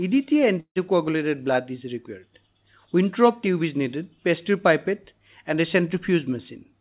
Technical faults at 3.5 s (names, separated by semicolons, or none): none